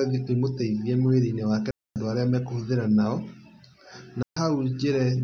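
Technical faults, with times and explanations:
1.71–1.96 s: digital wireless dropout. The speech cuts to near silence for about 250 ms, then returns. Too much of the radio link's data was lost, so the receiver muted with a very short fade instead of playing corrupted audio.
4.23–4.37 s: digital wireless dropout. A shorter hole of about 140 ms with the same clean near-silence and the same cause. Neither gap has a click or noise burst at its edges.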